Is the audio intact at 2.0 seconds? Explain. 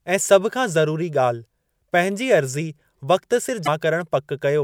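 Yes, at 2.0 seconds the audio is intact.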